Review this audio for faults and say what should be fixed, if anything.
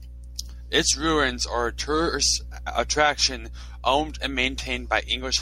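Nothing stood out on listening to this speech recording, so there is nothing that needs fixing.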